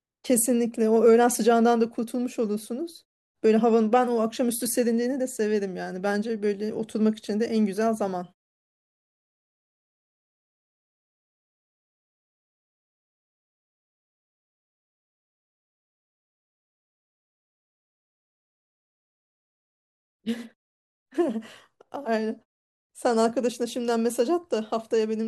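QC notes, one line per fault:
No faults heard in this speech clip.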